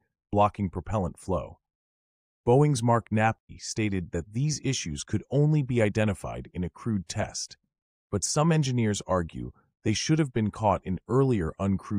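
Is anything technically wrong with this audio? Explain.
Yes, there's a stream reconnect from about 3.39 to 3.50 s. The connection dropped, leaving roughly 99 ms of silence, and a fresh decoder picked the stream back up slightly further along, so the audio jumps ahead a bit, well under a tenth of a second.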